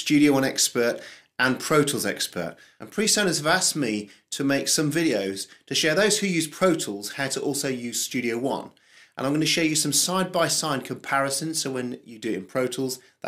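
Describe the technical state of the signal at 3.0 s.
At 3.0 s the signal is intact, with no audible fault at that moment.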